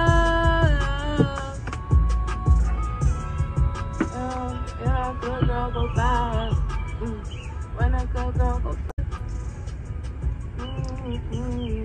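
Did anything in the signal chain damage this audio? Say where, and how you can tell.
Yes. At the codec stage, damaged data in the compressed stream produces a brief glitch from 8.87 to 8.99 s, about 120 ms. Corrupted bytes there made the decoder misread frames and lose sync until it found the next valid frame header.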